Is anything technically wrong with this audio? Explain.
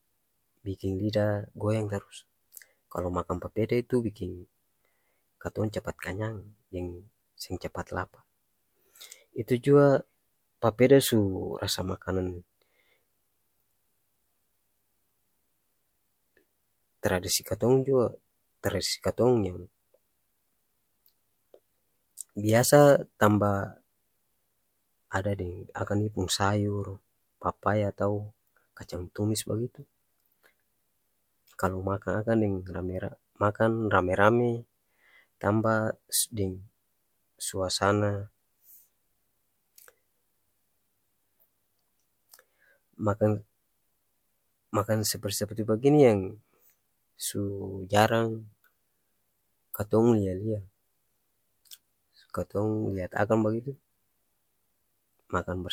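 No, nothing is technically wrong with this audio.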